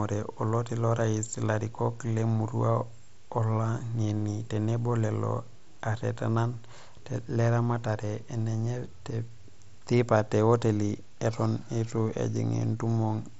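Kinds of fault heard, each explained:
Nothing faulty can be heard in this speech.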